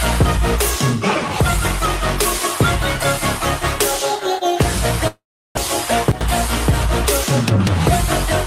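From 5.07 to 5.59 s there is what sounds like a long network dropout, likely from packets failing to arrive. The receiver stretches the last sound into a decaying buzz, and about 350 ms of that stretch is plain silence. Around 400 ms of the original audio is gone for good. When sound resumes it joins on without the lost part, and the timing shifts by roughly 70 ms.

Between 6.12 and 6.21 s the level drops abruptly by about 12 dB, with sound and background noise falling together. That is a sudden gain jump, likely a digital gain setting applied from one sample to the next instead of being ramped. Because the change lands instantly, it produces an audible step at the transition rather than a smooth fade.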